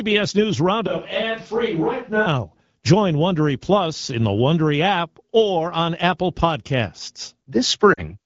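A switch to a distant microphone runs from 0.87 to 2.26 s. The speech turns suddenly roomy and hollow, thinner in the bass and about 5 dB quieter, with background noise rising to roughly 35 dB below it. The close microphone's signal most likely dropped out, leaving a farther pickup until it returns.

Lost AMR speech frames occur from 7.93 to 8.02 s, a 40 ms gap that fits two 20 ms frames failing their checks. The AMR wideband decoder, lightly coloured at 12.65 kbit/s here, fills the gap by repeating its last good settings at falling gain, so the sound drops to near silence within the two frames.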